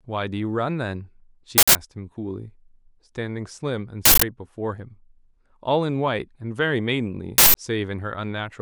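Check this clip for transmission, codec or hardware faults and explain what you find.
Three short bursts of harsh digital noise break into the speech, at 1.58 to 1.75 s, 4.05 to 4.22 s and 7.38 to 7.55 s, each lasting about 171 ms. This is an uninitialised buffer fault. Each burst is a whole block played out before any audio was written into it, so stale memory contents were sent to the output as samples. The identical lengths fit an 8192-sample buffer.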